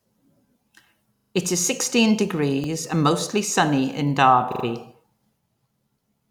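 Repeated buffer stutters at 1.16–1.32 s, 2.64 s and 4.52–4.64 s: late audio made the device replay a 40 ms piece, heard as hard-edged repeats.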